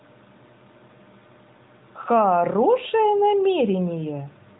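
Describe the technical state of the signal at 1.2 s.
At 1.2 s the speech is intact, with no fault at that moment, just the steady narrowband character of the AMR mobile codec, which passes nothing above about 3.8 kHz.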